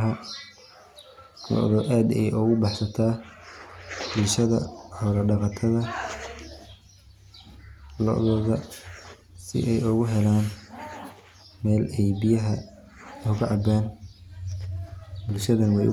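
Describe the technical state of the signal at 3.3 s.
At 3.3 s the speech signal is intact, with no audible fault at that moment.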